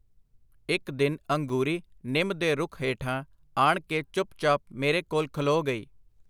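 At 1.49 s the speech drops out for about 5.3 ms in a block of digital silence, likely because the output buffer wasn't filled in time, which fits a 256-sample block. The hard cuts to and from zero make a tick or dip rather than an audible gap, and unlike a concealed dropout there's no fade or smoothing.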